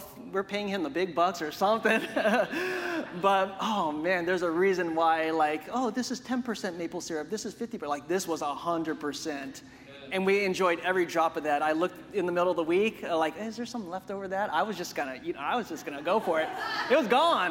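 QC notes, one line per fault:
Nothing stood out on a careful listen, and there is nothing to flag.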